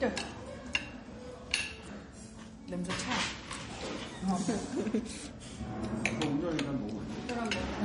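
From start to finish, the everyday sound has a dull, smeared top end. High frequencies seem thinned and blurred rather than crisp. This is low-bitrate audio saved at a high bitrate. The damage likely came from an earlier MP3 encoding at a very low rate, around 39 kbit/s, later re-saved as MP3 at about 256 kbit/s. The larger second file cannot restore detail the first pass discarded.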